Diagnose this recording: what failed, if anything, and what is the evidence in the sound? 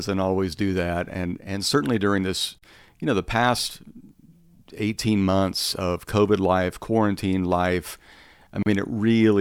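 Separately encoded pieces were joined untrimmed, leaving a gap at each join: silences of 41 ms at 2.59 s and 34 ms at 8.63 s, six seconds apart, interrupt the speech.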